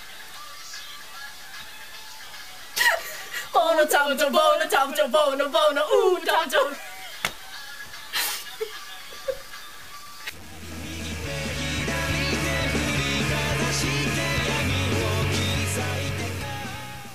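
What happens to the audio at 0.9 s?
At 0.9 s the audio carries the gritty, grainy distortion heard across the whole clip, sitting only about 20 dB below the signal. It is likely low bit depth without dither, with values truncated to about 6 bits. Unlike steady dither hiss, this error follows the signal, roughening and sputtering as the level falls.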